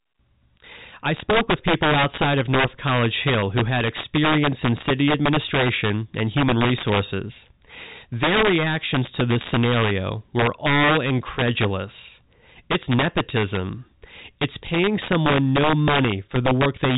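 Throughout the speech, integer overflow breaks the loudest peaks. The level runs about 6 dB past the integer limit, so a small fraction of samples wrap to the opposite sign instead of flattening. Each wrap is a violent crack, far sharper than clipping.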